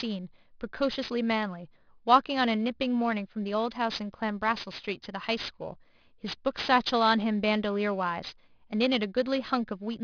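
Throughout the whole clip, sibilants in the speech come out gritty and metallic, with harsh tones that don't follow the voice and energy packed right up against a hard ceiling at 5.5 kHz. This is aliasing. The sample rate was lowered, which fits a drop from 24 kHz to 11 kHz, without first filtering out content above half the new rate. Everything above 5.5 kHz folded back down as false pitches, sitting roughly 15 dB below the speech.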